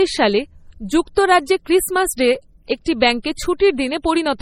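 From start to finish, the speech carries the watery, smeared texture of heavy MP3 compression, and the spectrum stops cleanly at 16.5 kHz, with nothing above it. The likely cause is low-bitrate audio saved at a high bitrate: the damage points to an earlier pass at around 32 kbit/s, later re-encoded as MP3 at a much higher rate. That second encoding keeps everything the first one left, so the artefacts and the missing top end remain.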